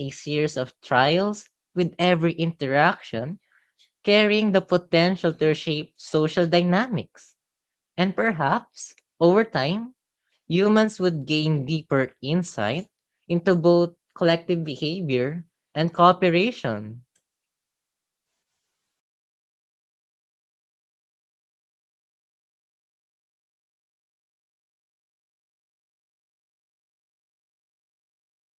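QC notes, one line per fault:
No faults to note in this speech clip.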